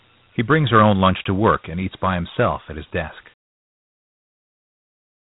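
From start to finish the speech carries Dialogic VOX ADPCM damage, and it is plainly audible. Nothing is present above 3.8 kHz, so the top of the band is cut away and sibilants lose their edge. The codec stores each sample as a 4-bit step relative to a running prediction, and with so few levels the reconstruction errors come through as a gritty hiss that tracks the speech. The sound points to a 32 kbps stream, consistent with 8,000 samples a second.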